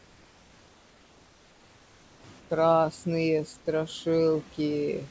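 A short speech clip with noise suppressor artifacts running all the way through. The suppressor pulls the steady background down by about 16 dB frame by frame, so between phrases the noise sinks and then swells back under the speech. On a spectrogram the noise floor looks patchy and blotchy, darkening in gaps and brightening beneath speech energy, with scattered flickering specks instead of an even haze. The waveform shows the floor pumping in step with the speech. Nothing appears above 8 kHz, which fits a wideband call codec such as G.722. From 0 to 2.24 s, and again from 2.40 to 2.50 s, the background loses its texture and becomes a flat, featureless hiss. This is comfort noise in place of the background, likely inserted by the receiver while the sender's voice detector had stopped transmission. The substitute sits about 3 dB and about 4 dB quieter respectively, around 32 and 28 dB below the loud parts. 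A spectrogram shows these stretches as uniform, smooth grey bands with no fine structure, and the waveform shows a slightly lower, perfectly even floor.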